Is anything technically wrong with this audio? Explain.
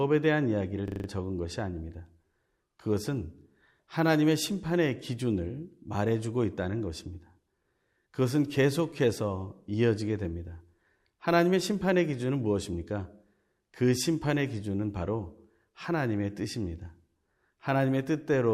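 Yes. From 0.88 to 1.08 s there is a system hang loop: a brief freeze left the audio hardware replaying its ring buffer, so one 40 ms slice of speech repeats five times, a buzzy 25 Hz stutter. The waveform shows five identical blocks, the spectrogram evenly spaced vertical stripes, and almost no speech is lost.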